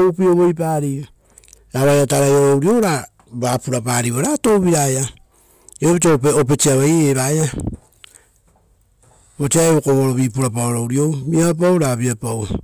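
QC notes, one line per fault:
throughout: crude rate conversion by linear interpolation at a 3:2 ratio, likely 32 kHz to 48 kHz; gritty inharmonic fizz about 25 dB down, with mirrored spectrogram images above 16 kHz following loud speech.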